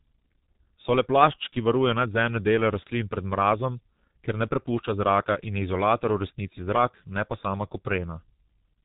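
Throughout the speech, heavy G.723.1 codec damage muffles and roughens everything: the slow 30 ms frame model smears consonants and adds hoarseness, fitting a rate near 6.3 kbit/s. A spectrogram shows a hard ceiling at 3.8 kHz, with blurred, coarse formant detail beneath it.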